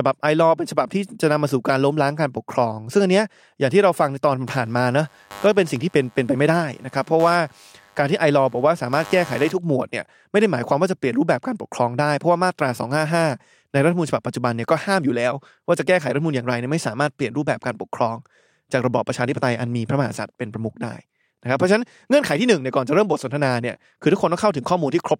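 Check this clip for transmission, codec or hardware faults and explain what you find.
One hardware fault shows up: computer activity noise, running from 4.47 to 9.58 s. Over that stretch a buzzy, scratching layer sits beneath the speech, pulsing around a hundred times a second and roughly 20 dB below it. It ignores the speech's rhythm and loudness, following something else entirely. Shifting load on the computer's processor, graphics card or mouse disturbs the ground shared with the audio circuitry, and those current swings leak into the recording as this pulsing interference.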